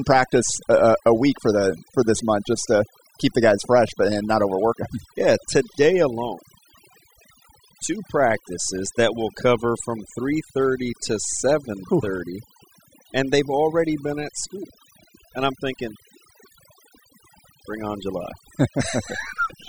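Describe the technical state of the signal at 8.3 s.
Overdone noise removal is present at 8.3 s, as it is throughout the clip. The noise reduction pulls individual frequency bands far down whenever they sit near its noise estimate, so the background drops and breaks up into twinkling specks, and quieter speech detail vanishes.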